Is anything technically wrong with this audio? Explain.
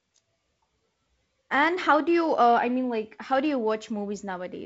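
No, nothing in this speech recording stood out as a technical problem on listening.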